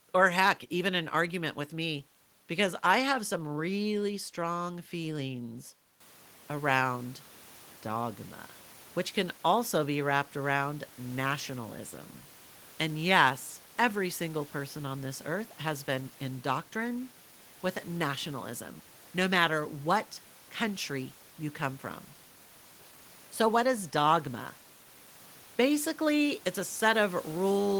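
The speech signal shows no technical faults, and the only change is the room's own background noise, which rises by about 12 dB around six seconds in and then stays roughly 27 dB below the speech.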